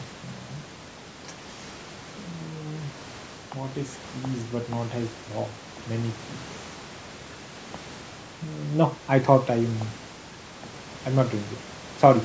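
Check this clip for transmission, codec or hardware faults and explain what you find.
Nothing stood out on listening to this speech recording; the call microphone processing trims the lowest bass and leaves nothing above 8 kHz, which is normal for that path.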